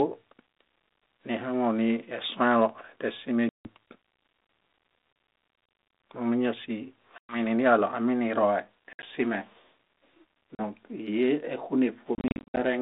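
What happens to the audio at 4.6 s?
At 4.6 s the speech is intact, with no dropout, glitch or distortion, only the narrow telephone band of the 32 kbit/s G.726 ADPCM path it passes through.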